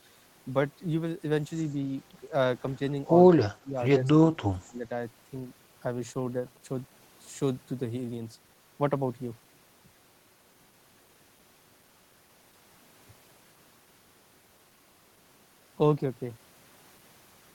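Around 3.31 to 3.76 s the speech ducks by something like 20 dB, then again from 4.09 to 4.83 s it sinks deeper, close to 30 dB, almost gone. That's speech suppressed in double talk, likely the echo canceller mistaking this side's talk, overlapping the far end's, for echo.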